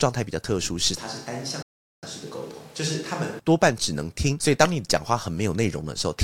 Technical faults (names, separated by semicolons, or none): switch to a distant microphone; playback stall